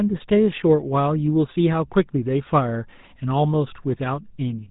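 From the start, the speech carries the GSM full-rate codec's damage, plainly audible throughout. The coder models the vocal tract and excites it with sparse regular pulses, discarding most excitation detail and everything above 4 kHz, which fits a 13 kbps full-rate stream. The result is a buzzy, gravelly roughness with a dull top end.

At 4.35 to 4.37 s, a brief lost GSM frames event occurs, consistent with a single 20 ms frame. The decoder repeated the previous good frame's parameters, so the sound briefly holds as a rough, metallic ring instead of continuing naturally.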